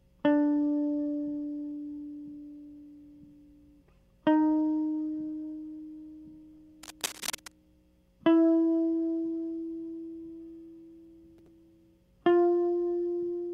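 From 6.83 to 7.52 s, a dense, ragged burst of scratching and rustling sits over the music, sitting roughly 10 dB below it. This is cable scratch noise, likely from a worn cable, connector or control being moved. As the contact shifts, its resistance jumps about rapidly, chopping uneven crackles into the signal for those seven-tenths of a second before the contact settles again.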